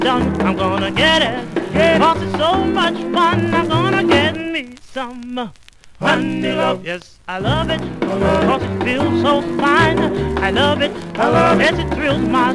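No audible technical faults anywhere in this recording.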